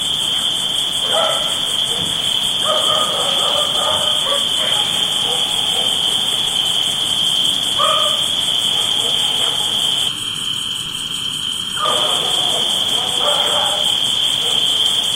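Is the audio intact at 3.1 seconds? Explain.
Yes, the audio is intact at 3.1 seconds, with no audible fault at that moment.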